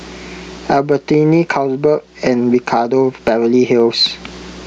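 Gain pumping runs through the whole speech clip. The level swings by around 20 dB. Loud and quiet parts sit close together and sound squashed. The likely cause is input gain set far too high, with a fast limiter clamping down on each peak.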